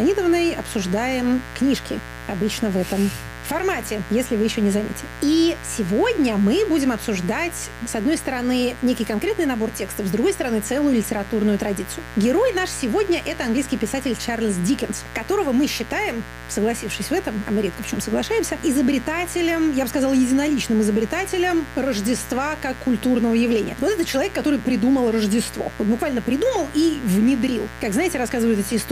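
An unshielded or poorly grounded path, or a dimmer or rectifier nearby, is letting sharp switching spikes from a 60 Hz mains supply into the signal, twice per cycle, for the whole clip. Because the spikes are so abrupt, they carry a dense ladder of 60 Hz harmonics stretching into the kilohertz range. The result is mains buzz, a steady, raspy drone sitting only about 15 dB below the wanted sound, present from start to finish.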